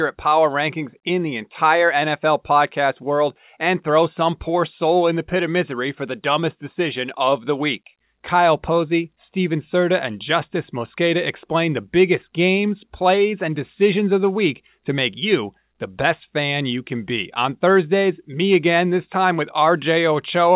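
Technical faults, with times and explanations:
No faults found; the speech has nothing above 4 kHz, which fits a normal narrowband call path such as G.711 mu-law at 64 kbps.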